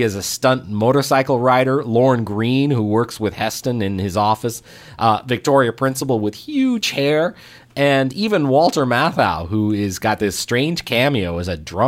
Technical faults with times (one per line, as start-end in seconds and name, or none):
none